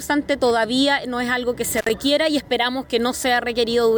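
An intermittent contact appears from 1.77 to 1.90 s: a loose plug or cable briefly opens, dropping the sound for about 56 ms with crackle at each edge.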